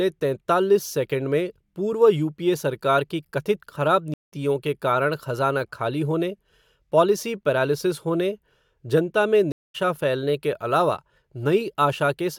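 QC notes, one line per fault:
4.14–4.32 s, stream reconnect: after "कथित ख़राब" the connection drops, leaving a 177 ms flat-line gap. A fresh decoder resumes roughly 150 ms later at "के कारण खज़ाना खाली", with a short fade-in edge on the waveform.
9.52–9.76 s, stream reconnect: after "पैरालिसिस होने जनता में" there is a 222 ms blank column on the spectrogram, then a jump ahead of roughly 200 ms to "फैलने के अलावा".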